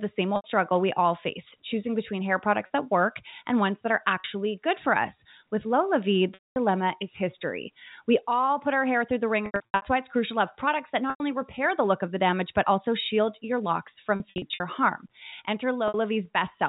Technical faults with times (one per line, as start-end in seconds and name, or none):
0.36-0.44 packet loss with pitch repetition
2.66-2.70 packet loss with pitch repetition
4.20-4.24 packet loss with pitch repetition
6.34-6.56 packet loss with pitch repetition
9.46-9.82 packet loss with pitch repetition
11.10-11.20 packet loss with pitch repetition
14.16-14.60 packet loss with pitch repetition
15.88-15.94 packet loss with pitch repetition